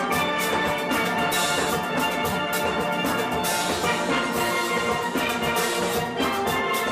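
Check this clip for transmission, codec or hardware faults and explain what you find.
There's one hardware fault here. At 2.33 s, a repeated buffer: new audio arrived late, so the device replayed a roughly 5 ms chunk three extra times, heard as a click or brief buzz.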